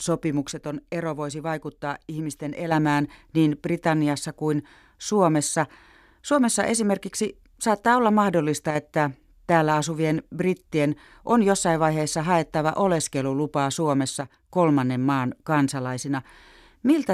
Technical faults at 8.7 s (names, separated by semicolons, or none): one channel drops out